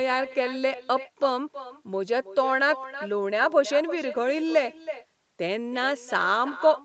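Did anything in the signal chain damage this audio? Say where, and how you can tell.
Yes. An echo with no canceller, a call-processing fault, runs through the whole clip. Every phrase returns roughly a third of a second later as a thinner copy about 13 dB down: the far-end loudspeaker feeds its microphone, and nothing removes it. Unlike room reverb, it is a distinct delayed repeat, not a smooth decay.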